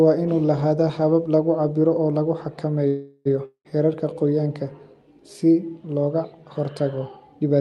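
From 2.87 to 3.27 s, a call audio freeze, likely from packets held up in transit until the jitter buffer ran dry. The receiver stretches the last sound into a fading buzz for about 0.38 s, then resumes exactly where it stopped, so nothing is lost but everything after arrives 0.38 s late.

At 3.45 s comes a long network dropout, likely from a run of packets that never arrived. About 0.2 s of audio is gone for good. The final sound trails off as a decaying hiss that ends in roughly 90 ms of silence, and at 3.67 s the audio jumps ahead, skipping the missing stretch.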